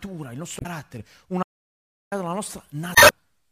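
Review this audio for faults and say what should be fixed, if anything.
Damaged data in a compressed stream shows up at 0.57 to 0.67 s and again at 2.92 to 3.11 s: corrupted bytes made the decoder misread frames and hunt for the next header, giving short glitches. On a spectrogram these appear as smeared broadband blocks; the waveform shows abrupt discontinuities. Preventing it means transferring and storing the file with checksums, or re-encoding from an intact source.

An audio dropout to silence runs from 1.43 to 2.12 s, cutting out about 0.69 s of the speech. The likely cause is a lost input, such as a disconnected device or a failed link, while recording continued as silence. The waveform goes flat and the spectrogram goes dark, with no room tone at all. To prevent it, secure cabling and links and monitor input levels during capture.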